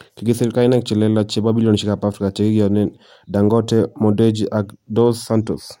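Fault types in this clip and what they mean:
Nothing in the speech stood out as a technical problem on listening.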